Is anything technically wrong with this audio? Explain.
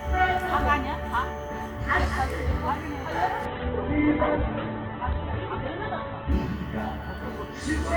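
Yes. From 3.46 to 6.39 s the sound turns muffled and rough, with everything above about 4 kHz gone, then clears again. This is a call bitrate drop: the encoder was starved of bits, consistent with a fall from roughly 48 to 8 kbps, so it coded coarsely and narrowed the bandwidth.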